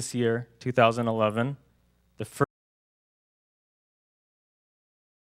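Audio runs fine until 2.44 s, then there's an audio dropout to silence, dead with no room tone, right to the end, likely from a lost input, link, or mute.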